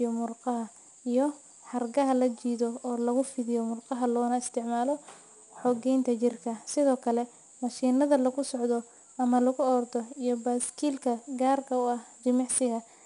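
From start to finish the speech carries plainly audible 4-bit ADPCM compression. Each sample is coded as a coarse 4-bit step from a predicted value, so a gritty hiss rides on louder passages. Nothing is present above 10.6 kHz, consistent with roughly 89 kbps.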